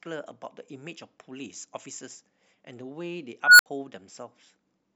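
Speech with an unstable filter at 3.44 to 3.66 s: a tone around 1.5 kHz swells over 150 ms into clipping, then 67 ms of silence; spectrogram shows a brightening horizontal line, waveform a ballooning envelope then flatline.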